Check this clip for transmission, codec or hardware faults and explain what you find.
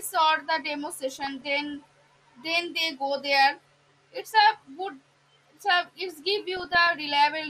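There are two problems: the whole clip carries low-rate compression damage, and two short stretches break into burbling.

MP2 compression runs right through the speech. It sounds dull and gurgly, with a grainy edge and treble that keeps dropping in and out. The likely cause is MPEG Layer II coding at a rate that fits around 80 kbps. With that few bits, the upper sub-bands get switched off frame by frame, and the bands that remain are quantised coarsely.

DAB burbling shows up from 1.12 to 1.46 s and again from 6.48 to 6.89 s. In both stretches short blips of noise sit on top of the speech. Bit errors got past the error correction and corrupted samples and scale factors, so single sub-bands blip with noise or jump in level for up to a frame. The first stretch suggests an error rate of a few tenths of a percent, and the second suggests a bit less.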